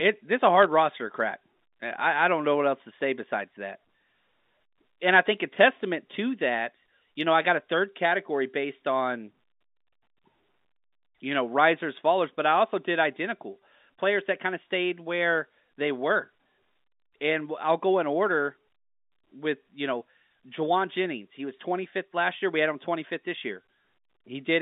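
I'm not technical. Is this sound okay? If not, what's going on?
No. Bit errors on a digital phone line cause brief sharp ticks at 0.63 s and from 5.34 to 5.38 s, where a few flipped bits corrupt single speech samples.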